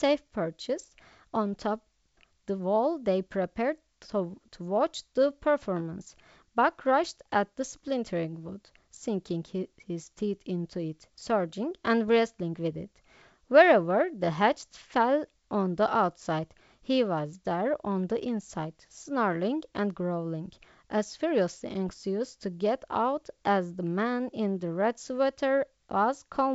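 At 12.08 s and again from 21.89 to 21.91 s, bit errors on an ADPCM link cause brief pops and rough bursts. Corrupted bits throw the decoder's step size off.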